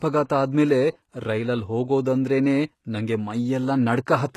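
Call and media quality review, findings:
Speech, whole clip: gritty, lispy s sounds, nothing above 12.3 kHz. Likely HE-AAC compression, fitting about 16 kbps. Band replication rebuilds the treble from copied lower bands, so harmonics mismatch.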